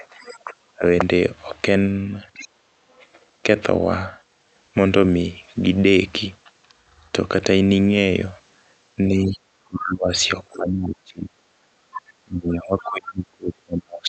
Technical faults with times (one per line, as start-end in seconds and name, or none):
0.00-0.84 speech suppressed in double talk
0.27-0.33 other side's voice leaking through
2.34-2.98 other side's voice leaking through
2.75-2.83 speech suppressed in double talk
9.19-14.09 speech suppressed in double talk
10.53-10.57 other side's voice leaking through
11.78-11.96 background gated by the echo canceller
11.96-12.90 other side's voice leaking through